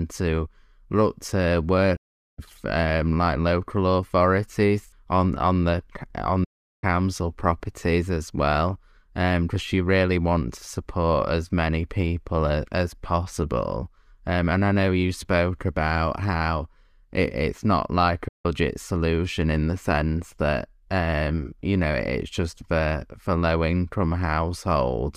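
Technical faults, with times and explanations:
1.96 to 2.39 s: digital broadcast dropout. After "to look to" the speech fades out over about 8 ms and stays silent for roughly 0.43 s. It returns mid-phrase at "um like local authorities". The receiver stopped getting usable frames and muted its output. The gap fits about 13 lost frames of 32 ms each. That speech is gone, not delayed.
6.44 to 6.84 s: digital broadcast dropout. The same quick fade drops into a silence of about 0.4 s. Speech picks up again at "properties as well because". Frames again failed to arrive intact, around 12 of them. The decoder held silence until clean data resumed. The short fade, not a hard cut, comes from the receiver's mute ramp.
18.28 to 18.46 s: digital broadcast dropout. After "it it's not like" there is a brief hole of about 0.18 s. The sound resumes at "solution in the sense". This one is shorter, roughly five frames lost. 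The mechanism matches the two before. Corrupted or missing frames triggered a fast mute, and whatever was sent in that window never reaches the listener.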